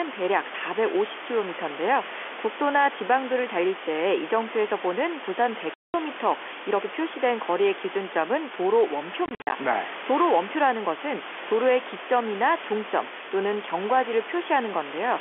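At 5.74 s the sound drops to dead silence for 200 ms, with hard edges. From 9.26 to 9.52 s it breaks up into several short holes, 160 ms missing in all, the longest lasting 50 ms. Both are packet loss filled with silence. Packets never arrived, and the receiver played silence in their place. The gap lengths fit 10 ms packets.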